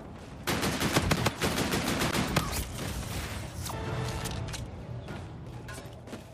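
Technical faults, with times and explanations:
1.16 s and 2.11 s, block of digital silence: The sound drops straight to zero and returns with no fade, so each gap is heard as a tick or dip. The first gap lasts 5.8 ms, which fits a 256-sample buffer left unfilled in time. The second lasts 13.5 ms.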